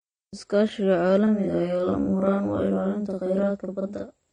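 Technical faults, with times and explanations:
Throughout: AAC compression, likely. Nothing comes through above about 9.7 kHz, and the codec damage is plainly audible, with a dull, smeared quality. That lowered cut-off and the spectral thinning point to AAC-LC at a low rate, which fits roughly 32 kbps.
1.27 s to 4.32 s: channel delay (doubling). From here to the end, a second copy trails the first by 46.4 ms, heard as a doubling or slap at equal level. One channel ran late by a long buffer, which fits 2048 samples, before the mono fold-down.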